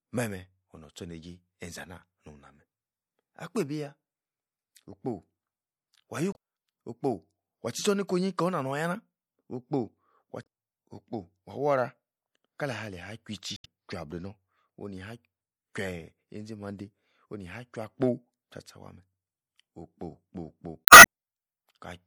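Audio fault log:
Throughout: MP3 compression. The speech has a plainly audible watery, swirling quality with dulled treble, which fits a 64 kbps encode and is likely the cause. At that rate the encoder cannot fund every frequency line, so it cuts the top of the spectrum at a fixed point and drops quieter components. Because those components switch on and off frame by frame, the sound shimmers, and sibilants pick up a metallic edge.
6.31–6.36 s, 10.42–10.47 s (just before "okpo wah"), 13.56–13.66 s, 20.85–21.04 s: damaged data in a compressed stream. Each spot is a brief break in the speech, and the last is the longest at about 0.2 s. Here the compressed stream holds corrupted bytes, so the decoder misreads the frames, loses its place and hunts for the next valid frame header. The garbled or missing frames meanwhile are what breaks into the speech before normal decoding resumes.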